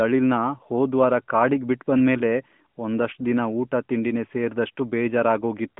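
No technical faults can be heard in this speech, which comes through a narrowband mobile line that carries nothing above about 3.6 kHz.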